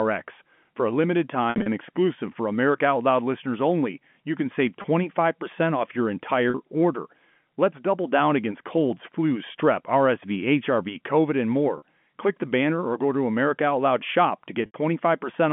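At 1.5 to 1.66 s, after "a limited", packet loss with pitch repetition breaks the sound. About 120 ms goes missing in runs up to 60 ms. The receiver fills each gap by repeating the last pitch period, so the sound holds and buzzes briefly. Shorter dropouts follow at 4.82 s, after "only you can save", at 6.5 s, after "off your", at 11.78 s, and at 14.66 to 14.74 s. The gaps come in 20 ms steps, which fits 20 ms packets. The G.711 telephone band sits under all of this.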